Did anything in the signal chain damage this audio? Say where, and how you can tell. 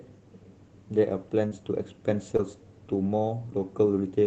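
Yes, at the network stage: short concealed packet loss at 1.47 to 1.53 s and 2.37 to 2.40 s. About 40 ms, then 20 ms, of audio arrived too late, and the receiver bridged each gap by extrapolating the preceding sound, heard as a brief smear before blending back into the Opus stream.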